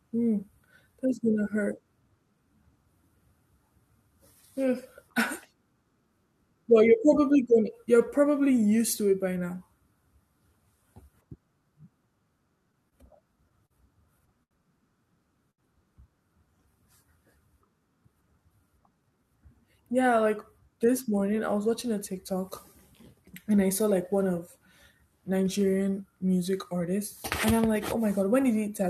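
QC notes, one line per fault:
12.59–13.73 s, repeated stalls (stutter): seven brief freezes, the longest 41 ms, where packets arrived late and the jitter buffer kept running dry. The receiver continued the last sound each time, about 110 ms in all, so nothing is lost, but the speech drags and stutters rather than dropping out.
14.43–14.54 s and 15.51–15.61 s, short stall from a late packet: in each case one packet came about 75 ms late and the receiver stretched the preceding sound to cover it, then resumed where it left off. Each is a single held sound, not a run of stutters, and none of the speech is missing.
18.27–19.25 s, jitter buffer speed-up: the buffer had built up excess audio, so the receiver trimmed short pitch-period slices in quick succession, taking out about 150 ms. The speech runs at 112% speed with unchanged pitch and sounds hurried, the reverse of a stall.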